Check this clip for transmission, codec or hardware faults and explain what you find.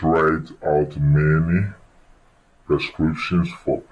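The clip has a wrong sample rate fault for its whole length. The playback side is clocking out samples more slowly than they were captured, with no resampling. The slowdown fits audio recorded at 32 kHz but played at 22 kHz. Everything runs at 0.689 times its proper speed and drops by 6.45 semitones, so the speech sounds deep, drawn out and sluggish, with the timing and pitch shifted together.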